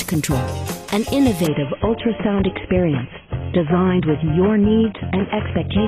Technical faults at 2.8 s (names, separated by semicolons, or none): adaptive stream at a lower bitrate